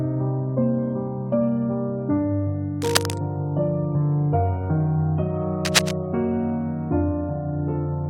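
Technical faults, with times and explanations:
2.82–3.18 s and 5.65–5.93 s, cable scratch noise: two brief bursts of dense, ragged rustling sit over the sound, the first slightly quieter than the audio and the second about as loud as it. This is likely a worn cable or connector being moved, its contact resistance jumping erratically. On a spectrogram each burst is a broadband smear of irregular vertical streaks. The waveform shows jagged, uneven spikes riding on the signal.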